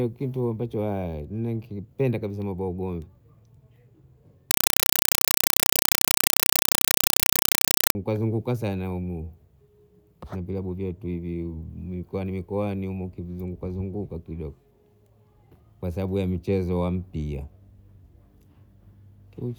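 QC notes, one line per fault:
4.51 to 7.95 s, compressed stream played as audio: the speech drops out and very loud, chattering static takes its place. The output is treating coded data as ordinary samples instead of decoding it. Each coded frame arrives as a burst of noise about 4 ms long, then zero padding. The bursts repeat 31.25 times a second, which gives the harsh rattle. The frame pattern points to an AC-3 stream at around 192 kbps.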